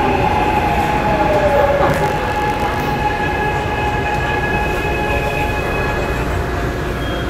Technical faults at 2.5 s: buffer tearing

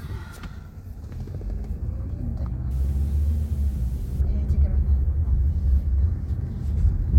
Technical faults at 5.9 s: none

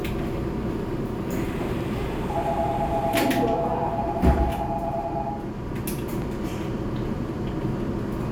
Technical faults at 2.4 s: none

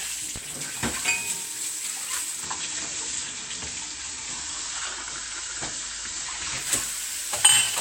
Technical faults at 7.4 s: none

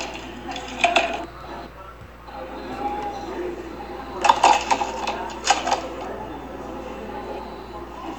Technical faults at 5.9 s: none

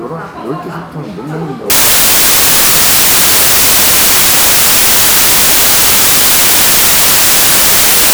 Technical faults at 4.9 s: samples built from the wrong bytes

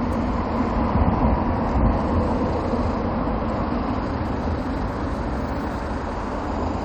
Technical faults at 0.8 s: damaged data in a compressed stream

